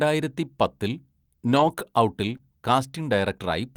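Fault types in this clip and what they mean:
Lost packet rebuilt from error correction: from 1.47 to 1.73 s, 1.79 to 1.81 s and 2.29 to 2.35 s, low-bitrate copies cover the losses; rougher, noisier frames with a blurred spectrogram texture.
Short concealed packet loss: at about 1.75 and 2.37 s, each 20 ms hole is filled by extrapolating the previous sound, leaving a brief smear before blending back into the real audio.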